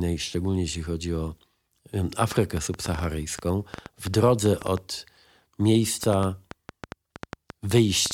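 From 2.32 to 8.12 s, a train of clicks ticks unevenly at 5.35 per second, about 10 dB above the speech, likely from interference; a spectrogram shows thin vertical lines, and the waveform shows narrow spikes.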